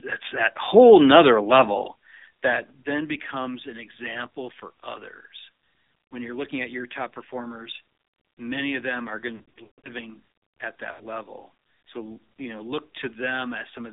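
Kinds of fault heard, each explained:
AMR narrowband mobile codec: The speech runs through a 2G/3G mobile codec that models the vocal tract with a few pulses per frame. Here it sounds buzzy and synthetic, which fits a low rate near 7.4 kbps. The band is confined to roughly 250 Hz to 3.7 kHz.
Lost AMR speech frames: Corrupted frames make the decoder repeat its last good settings at falling gain. After "of them are going", 9.36 to 9.90 s brings scattered drawn-out warbles and fades, the longest gap about 140 ms. A shorter 80 ms dropout follows at 10.92 s.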